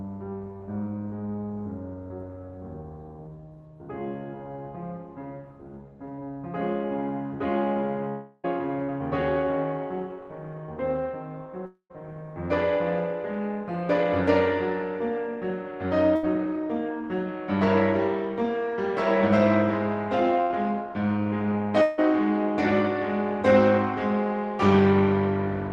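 At 6.15 to 6.22 s the music smears briefly where short concealed packet loss was patched over about 20 ms by extending the preceding sound. From 8.09 to 8.60 s a fading buzz or hiss replaces about a third of a second, and another short concealed packet loss wobbles 8.84 to 8.90 s. At 11.66 to 11.92 s the fill decays into roughly 0.1 s of silence, and 21.82 to 22.00 s brings a similar fading fill; these three gaps likely come from a long network dropout, with the missing music skipped on resumption. A burst of packet loss at 16.16 to 16.25 s and 20.42 to 20.52 s turns about 80 ms each into a fading hold before playback jumps ahead.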